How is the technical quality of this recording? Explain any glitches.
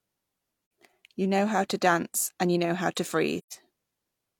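Two brief dropouts from AAC frame loss with muting: the decoder zeroes missing frames and window overlap fades sound out and back, leaving soft-edged silent gaps. One is at 0.62 to 0.70 s (85 ms, consistent with two frames), the other at 3.39 to 3.53 s after "you know how to" (128 ms, about three frames).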